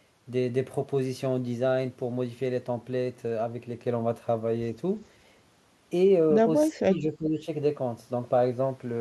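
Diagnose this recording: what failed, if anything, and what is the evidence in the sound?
The fault sits in call processing. Between 6.71 and 7.47 s the speech dips by as much as about 15 dB, in broken stretches adding up to about half a second. On a waveform the envelope pinches inward in uneven bites; on a spectrogram the speech energy fades and thins in those gaps. The likely cause is speech suppressed in double talk: with both ends talking, the echo canceller couldn't separate the near talker from loudspeaker echo and attenuated both.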